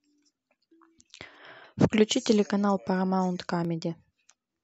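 Clock drift buffer slips in this speech clip, about seven regular clicks every 0.77 s from 0.59 to 4.41 s, likely from two mismatched clocks dropping or repeating a few dozen samples.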